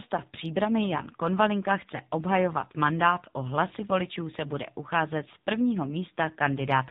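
Throughout, the speech has been squeezed through the AMR narrowband mobile codec at a low bitrate, with a sound that fits roughly 7.4 kbps. Everything above 4 kHz is cut away, and the few pulses driving the vocal-tract model leave the voice plainly buzzy and synthetic.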